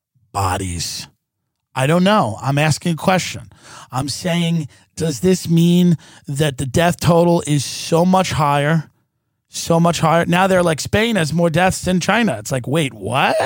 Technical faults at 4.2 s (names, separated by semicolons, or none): channel delay (comb filtering)